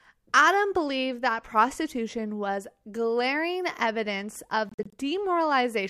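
Right after "was glaring evidence of", from 4.69 to 4.94 s, the speech breaks into short gaps: about 116 ms missing in total, the longest hole around 46 ms, with playback picking up as if it had run on. That's a likely Bluetooth dropout, with packets arriving too late.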